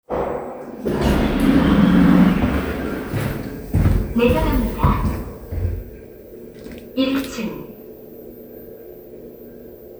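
No technical faults can be heard anywhere in this sound.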